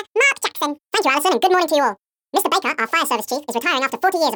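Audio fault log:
throughout: audio read two samples at a time (double speed). Everything plays at twice the intended rate and sits a full octave high, 12 semitones up, because the reader is treating each pair of consecutive samples as a single frame, as if the stream were stereo or used samples twice as wide. Half the samples are effectively skipped per output frame, so any strong content above a quarter of the sample rate folds back below the new limit.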